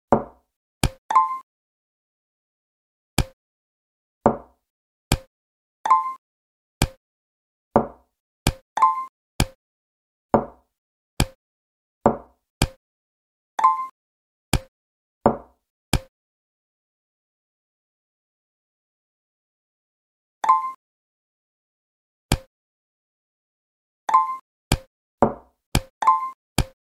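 No technical faults turn up anywhere in the audio, so there is nothing to place in time order.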